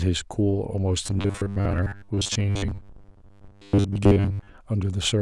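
From 1.04 to 4.57 s the speech turns into a robotic sound from repeated short buffers, a metallic 100 Hz buzz, likely 10 ms chunks looping while most real audio gets skipped.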